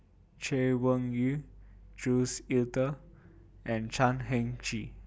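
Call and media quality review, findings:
Nothing stood out on listening to this speech clip.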